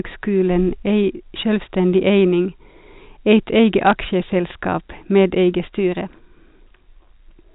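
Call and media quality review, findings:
Bit errors on a digital phone line, 3.87 to 3.93 s: short burst of sharp ticks over unchanged speech, four frames affected, error rate roughly a fifth of a percent. Single flipped bits in the 64 kbps G.711 mu-law stream corrupt individual samples. Sign or high-order hits give the loudest clicks. Waveform: isolated one-sample spikes. Spectrogram: thin vertical broadband lines.

Channel delay (comb filtering), 5.2 s to end: top end turns slightly dull. Probable cause is one channel lagging about 2 samples (roughly 0.05 ms) before a mono sum, cancelling shared content at evenly spaced frequencies. First notch near 10 kHz. Waveform: little visible change.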